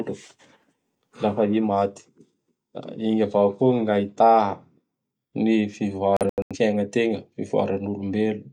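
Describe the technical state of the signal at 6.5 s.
At 6.5 s the speech is inside a digital broadcast dropout running from 6.17 to 6.56 s. The receiver mutes on failed frames, punching several short silent holes, about 213 ms in all, longest 85 ms. Unlike a stall, the lost material is skipped rather than delayed.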